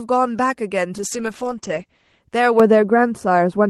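From 0.98 to 2.29 s there's a call bitrate drop. The bandwidth estimate fell, so the encoder was told to squeeze the speech into far fewer bits. For about 1.25 s at the bottom of the dip it sounds rough and watery, and the top end is gone, with content above roughly 8 kHz cut where before it reached 20 kHz. That fits a fall from around 32 kbps to something near 9 kbps.

Then from 2.60 s to the end at 3.70 s, de-emphasis was applied wrongly. A treble cut meant to undo a pre-emphasis boost landed on audio that never had one, or got applied a second time. The result is a smooth downward tilt, about 11 dB lower at 10 kHz than at 1 kHz, so the speech turns dull and muffled without the grainy texture of the bitrate dip.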